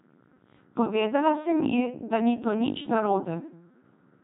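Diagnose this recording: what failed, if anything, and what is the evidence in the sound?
The failure sits in the codec stage: the speech has passed through the Codec 2 vocoder, and the damage runs from start to finish. It sounds robotic and buzzy, with nothing above 3.8 kHz, and the heavy degradation fits a rate around 2.4 kbit/s. The original waveform is gone. The decoder rebuilt the speech from sine waves driven by pitch, voicing and a spectral envelope. A telephone-band limit or a waveform codec would keep natural breath and texture; this replaces them with synthetic tone.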